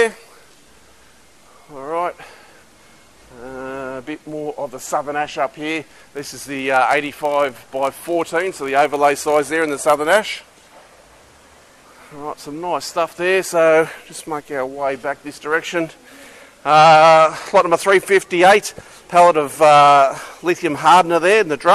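From 5.59 s to 11.60 s the audio carries a steady ticking buzz at 46.9 Hz, the signature of a filter restarted on every block. The filter discards its internal state at each block boundary and starts again from silence, so every block opens with a small transient. Those transients repeat at the block rate, which fits a 1024-sample block, and they grow and shrink with the level of the sound.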